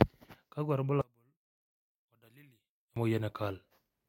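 From 1.01 to 2.96 s the speech drops by about 32 dB to a faint trace, with the centred voice and low end almost gone. The likely cause is one channel inverted: one stereo channel has reversed polarity, so the shared content cancels in mono.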